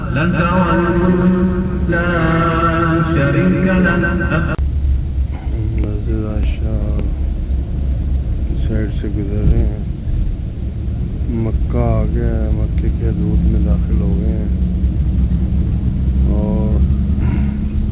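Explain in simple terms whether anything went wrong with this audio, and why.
Nothing went wrong here; the audio simply came through an ordinary phone-style call connection, which is why nothing above about 4 kHz is present and it has that familiar narrow telephone sound.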